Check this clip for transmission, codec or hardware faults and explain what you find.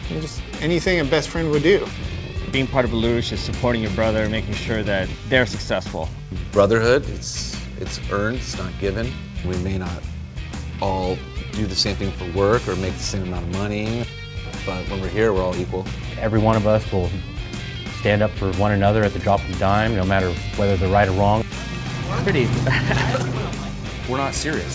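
The signal arrives intact over the WebRTC call path, with the codec's ordinary coding texture and a band limit at 8 kHz, which fits wideband G.722, and nothing in the transmission, coding or hardware stands out as a fault.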